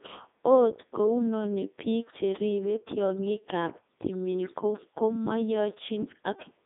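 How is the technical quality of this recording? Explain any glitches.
Robotic and buzzy from start to finish, with nothing above about 3.8 kHz, because the whole recording has passed through the Codec 2 vocoder, which fits its top 3.2 kbit/s mode. Only pitch, voicing, energy and a spectral envelope survive, and the decoder rebuilds the speech from sine waves within roughly 200 Hz to 3.7 kHz, so the original waveform is heavily damaged.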